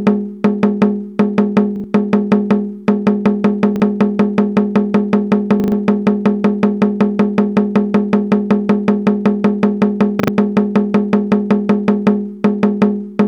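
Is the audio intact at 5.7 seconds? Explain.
No. A repeated buffer runs from 5.6 to 5.72 s: a piece of about 40 ms replays three extra times with hard joins, giving a short stutter and losing about a tenth of a second.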